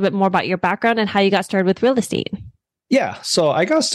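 Hard clipping runs through the whole of this speech clip. The signal was driven about 3 dB beyond what one stage in the chain could pass, so the highest peaks were sliced flat instead of rounding over. Only a small share of samples, around half a percent, hit that ceiling. The squared-off tops add high harmonics, heard as brief crackles and a gritty edge on the loudest syllables rather than a constant fuzz.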